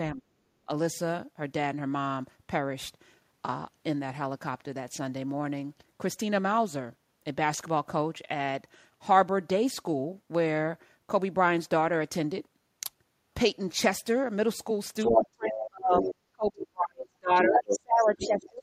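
A speech recording in which the talker's level drops sharply, by roughly 35 dB at its deepest, around 0.13 to 0.32 s, 15.11 to 16.05 s and from 16.32 s to the end, is speech suppressed in double talk. The echo canceller likely mistook the talker for the far end's echo while both spoke. Unlike leakage, nothing is added: the talker simply fades or breaks up. The other side's voice leaking through is a second voice appearing at 15.01, 15.53, 15.97, 17.37 and 17.98 s, ranging from well below to slightly above the talker. That is likely residual loudspeaker echo the canceller failed to remove.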